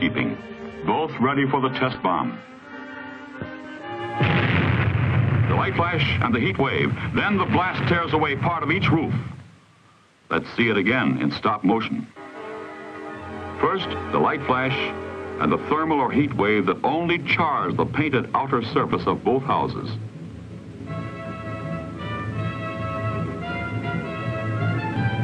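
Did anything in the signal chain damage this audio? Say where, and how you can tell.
Yes. From 0.0 to 4.0 s the audio shows an adaptive stream starting at a low bitrate, a playback-stage fault. Nothing sits above about 8.3 kHz, and codec artefacts are stronger. At 4.0 s the treble returns and the artefacts ease in one step with no gap. That pattern fits a player opening on a roughly 24 kbit/s AAC rendition and switching to about 96 kbit/s once it had measured throughput. A band-limited source would stay dull throughout, and a network dropout would leave a gap or glitch.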